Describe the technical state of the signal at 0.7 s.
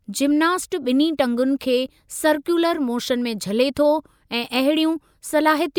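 At 0.7 s the speech signal is intact, with no audible fault at that moment.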